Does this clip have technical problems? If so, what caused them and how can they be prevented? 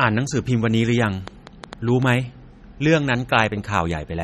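Yes. Throughout the speech there is a plainly audible watery, swirling quality, and nothing is heard above 13.2 kHz. This is likely MP3 compression at a low bitrate, around 32 kbps: short of bits, the encoder drops weak frequency components that flicker between frames and cuts the treble. Encoding at a higher bitrate or keeping a lossless copy prevents it.

From 1.03 to 2.03 s a train of clicks ticks over the audio, roughly seven pops at an uneven pace of about 6 per second, reaching roughly 5 dB above the speech. Repeated pulses like these likely come from interference from nearby equipment, a faulty connection or a faulty power supply. Checking cables and connectors, using a clean power supply and keeping the recording gear away from other electronics prevents them.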